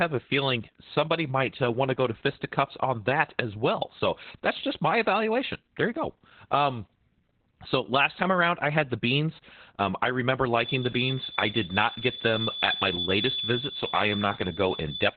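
Opus voice compression runs throughout this speech clip: heavy SILK coding confined to a 4 kHz band leaves it muffled, hoarse and robotic, consistent with roughly 8 kbps.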